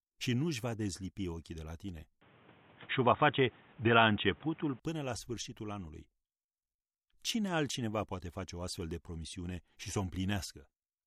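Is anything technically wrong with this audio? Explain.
Yes. Input switched to a poorer device, 2.21 to 4.80 s, after "ochii de la tine": likely a narrower microphone, so the speech dulls above 3.8 kHz, shifts level and gains faint noise until "până la sfârșitul anului".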